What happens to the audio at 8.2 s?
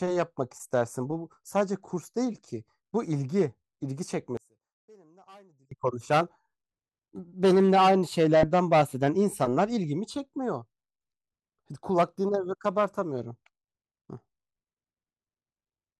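At 8.2 s the speech continues without any audible technical fault.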